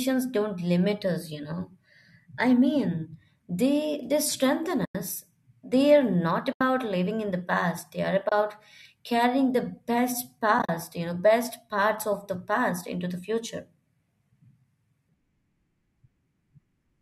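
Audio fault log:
4.85–4.95 s, 6.53–6.61 s, 8.29–8.32 s, 10.59–10.69 s: AAC frame loss with muting. The sound drops to silence after "mean they they strengthen", between "are not" and "living in the past", briefly at 8.29 s, and before "you know", where the 100 ms gap is broken into short holes of up to about 40 ms. Lost frames were decoded as zeroed spectrum, and the overlapping windows of the likely low-delay AAC codec fade each edge, so the holes are soft-edged. A hard dropout would click, and concealment would repeat sound instead.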